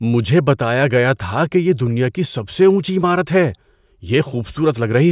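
Nothing in this stretch of speech stands out as a technical fault, so there's nothing to flag here.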